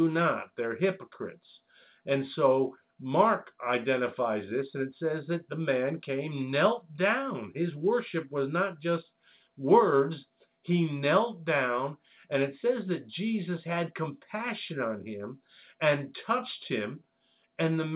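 No technical faults are audible.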